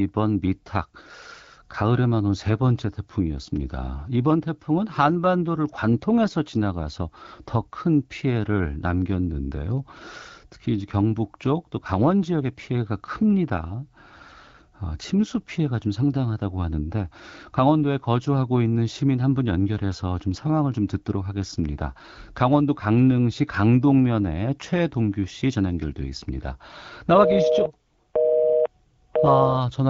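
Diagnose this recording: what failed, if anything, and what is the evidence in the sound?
Nothing failed in this recording; the speech comes through the AMR wideband (HD Voice) codec at 12.65 kbit/s, a rate at which that codec keeps speech clear.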